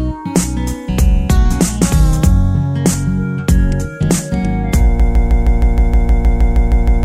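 From 5.00 s to the end, a broken-record loop repeats one 157 ms fragment back to back, likely a stalled player or stream resending its last buffer.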